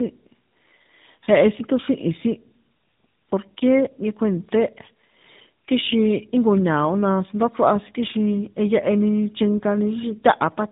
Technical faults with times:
0.00-10.72 tandem speech coding

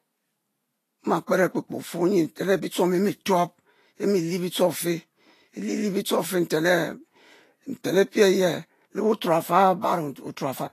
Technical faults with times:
0.00-10.73 Vorbis compression

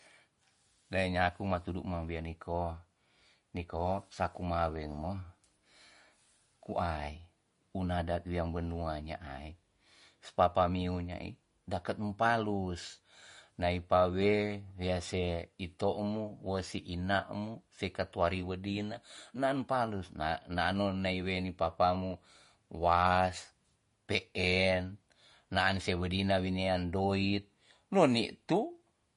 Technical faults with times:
0.00-29.17 MP3 compression

